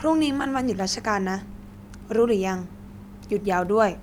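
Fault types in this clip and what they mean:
Nothing to flag here, as the speech comes through without any technical faults worth listing.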